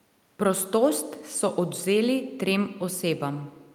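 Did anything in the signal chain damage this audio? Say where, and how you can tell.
No, nothing in the chain audibly damaged this speech.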